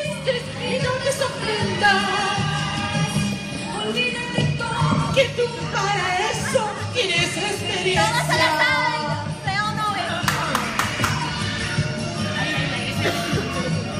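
Nothing goes wrong anywhere in this one; there's no fault to report from the first moment to the last.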